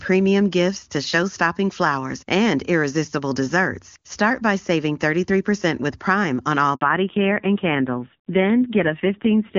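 At 6.75 s, just after "on all", a handover gap cuts in: the call was passed between networks and no frames arrived for about 60 ms, so the sound fades out quickly and sits silent until 6.81 s. On a waveform this is a short flat stretch with a quick fade at its leading edge; a spectrogram shows a narrow vertical blank band across all frequencies, and whatever was said inside it is simply gone.

From 6.81 s to the end, a fallback to narrowband follows the handover. The earlier stretch is clean AMR wideband (HD Voice) at a rate that fits 23.85 kbit/s, with codec damage faint or absent. After the switch, the audio is carried by narrowband AMR at a low rate that points to 5.9 kbit/s. Nothing survives above 4 kHz, so the voice turns muffled and rougher. A spectrogram shows the energy ceiling falling abruptly from about 7 kHz to a hard 4 kHz edge at 6.81 s.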